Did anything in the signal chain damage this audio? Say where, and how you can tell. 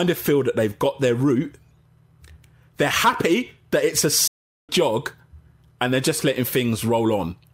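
Yes: a playback stall after "happy that it's a" silences the speech from 4.27 to 4.69 s, a blank spectrogram column, likely a starved player buffer.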